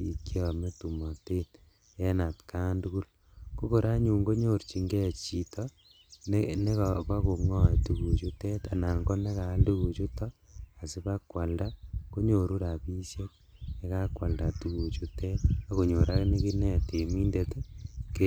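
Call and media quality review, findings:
No faults found on this speech signal; nothing was noted that would need attention in the call or media path.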